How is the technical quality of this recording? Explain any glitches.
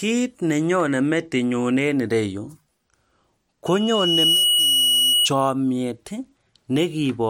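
The recording has one clear fault, a loudspeaker feedback squeal. From 3.66 to 5.30 s, a 2.9 kHz tone swells over most of a second to sit a few decibels above the speech. The microphone is picking up its own loudspeaker, and at that frequency the loop gain exceeds one, so the tone keeps feeding itself. A steady interference whistle would start at full level; this one grows from nothing.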